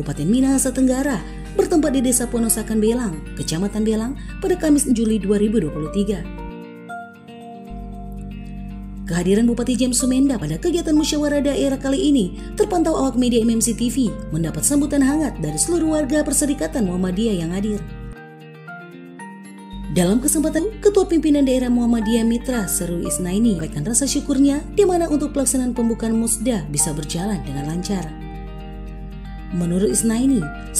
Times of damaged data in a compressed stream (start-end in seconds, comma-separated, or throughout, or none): 4.90, 10.40, 16.23, 20.57, 23.59